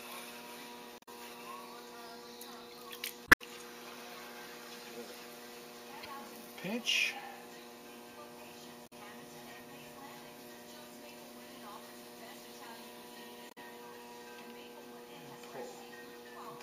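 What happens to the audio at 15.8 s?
Nothing goes wrong at 15.8 s; the audio plays through that moment intact, with no dropout, click or distortion.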